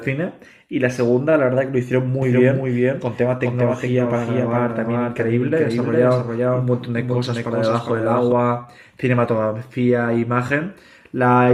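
A second, slower path likely captures the speech again, giving a doubled audio track from 2.22 to 8.32 s: a dry copy about 5 dB down trails by around 0.4 s.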